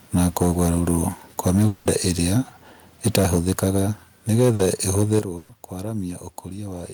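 Speech with microphone overload in four stretches, at 0.14 to 1.04 s, 1.39 to 2.39 s, 3.05 to 3.8 s and 4.31 to 5.19 s. The loudest peaks are flattened, most severely in the third stretch, at about 14 dB over, and by about 6 to 9 dB elsewhere, giving a harsh, crackling edge. The likely cause is input gain set too high, driving a few percent of samples into the converter's ceiling. Inside the second stretch, a long network dropout from 1.67 to 1.87 s replaces about 180 ms of audio with a continued, decaying sound. The sound then resumes further on with that section missing and no fully silent gap, most likely because no audio arrived for that period. Microphone volume is stepped down twice, by about 3 dB at 3.16 s and by about 10 dB at 5.19 s, right at the end of the last overloaded stretch. Level and background noise fall abruptly each time, consistent with automatic gain control reducing the device input after clipping. 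Short concealed packet loss at 4.55 to 4.61 s produces a brief smear, because roughly 40 ms never reached the decoder and was filled by extending the preceding sound before crossfading back. A burst of packet loss from 5.37 to 5.51 s replaces about 120 ms with a held, fading continuation of the previous sound. Playback then picks up later, with the intervening audio gone.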